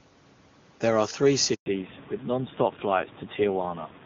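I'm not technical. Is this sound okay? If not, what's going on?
No. At 1.54 s there is a handover gap: the call switched networks and the sound dies away and stays silent for about 120 ms, resuming at 1.66 s, unlike a crackly glitch. From 1.66 s to the end comes a fallback to narrowband: the call drops to an older phone format, losing everything above 4 kHz, so it suddenly sounds duller and rougher, like an old landline, rather than gradually muffled. The background room noise that gets louder around 1.5 s comes from the room itself, not the phone system.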